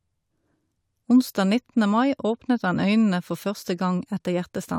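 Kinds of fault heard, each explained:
No technical faults detected on this speech recording; nothing to list.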